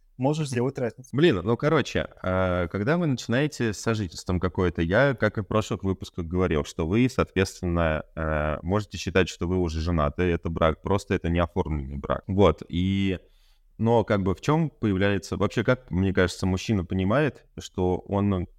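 Nothing goes wrong technically anywhere in this speech recording, so there's no fault to point to at any moment.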